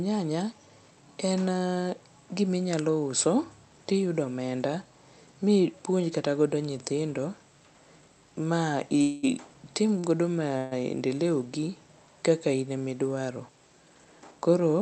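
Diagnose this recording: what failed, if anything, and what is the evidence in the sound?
Two call audio freezes, at 9.01 to 9.25 s and 10.58 to 10.73 s, sit at the network and jitter-buffer stage. In each the sound halts and the receiver carries the last fragment on as a fading buzzy tail, about 216 ms and 138 ms long, never reaching silence. The sound then resumes from where it stopped, with nothing skipped. The likely cause is packets held up in transit, draining the buffer until they arrived.

A short stall from a late packet occurs at 9.99 to 10.06 s, also at the jitter-buffer stage. One packet missed its playout time, so the receiver stretched the preceding sound by 46 ms, heard as a briefly held sound with a slight buzz or dip, and then continued from the same point once the packet landed. No audio is lost, but end-to-end delay grows by the length of the stretch, adding to the delay built up by the earlier freeze.

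A jitter buffer speed-up runs from 13.83 s to 14.82 s. Having accumulated more audio than its target, the buffer trims it back by repeatedly cutting out pitch-period-sized pieces. Playback runs at about 111% speed with pitch unchanged, so the closing stretch of speech sounds hurried. Roughly a tenth of a second is removed in total, through the Opus call path, which is band-limited at 8 kHz.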